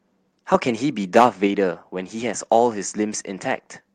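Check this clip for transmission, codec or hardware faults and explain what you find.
Two faults are present, both microphone-side. There are no transmission or codec problems to report.

Microphone overload appears at 0.54–0.56 s, about 1 dB over full scale, and again more strongly at 1.16–1.26 s, about 5 dB over, where a small share of samples are clipped. The likely cause is input volume set too high, so the loudest speech peaks exceed the converter's ceiling and get sheared off. It sounds harsh and crackly. The waveform shows flattened peak tops, and the spectrogram shows brief vertical smears of added high-frequency energy.

The microphone volume is stepped down at 1.47 s. Shortly after the second overload, the whole signal drops by about 3 dB in a single step, likely because the call software reacted to the clipping by cutting the device's input gain. Speech and background both become abruptly quieter. 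On the waveform the envelope visibly shrinks at that point, and the spectrogram dims uniformly across all frequencies.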